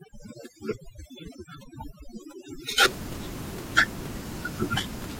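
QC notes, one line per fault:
0.0–2.85 s, overdone noise removal: an over-strong noise reduction stage shuts off frequency bands near its noise estimate, leaving near silence with twinkling specks. Unlike a low-bitrate codec, it stops at 2.85 s, when room noise about 12 dB below the speech returns.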